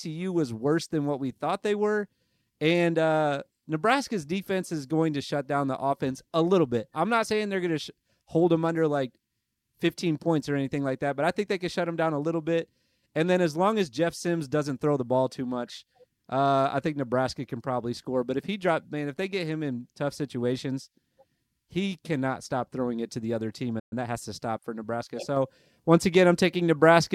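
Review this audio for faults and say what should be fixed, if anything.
A playback stall silences the speech from 23.79 to 23.93 s, about 120 ms. The player likely ran dry or its thread was blocked. Time-compressed catch-up follows from 23.93 to 24.17 s. Small pieces are cut and cross-faded at 1.5x speed, so the audio sounds hurried at normal pitch. A deeper playback buffer and an unblocked audio thread should prevent the stall and the catch-up it triggers.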